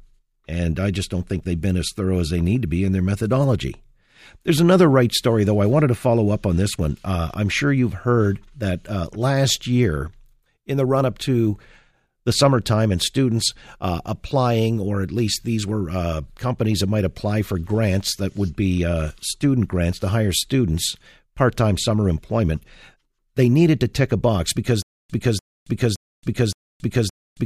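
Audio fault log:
24.82–27.45 s, stutter with silent gaps: after "tick a box because", a 294 ms burst repeats four times at a 568 ms pace, with 274 ms of dead silence between, to the end. Likely a stalled stream replaying its last fragment, so the real audio is lost.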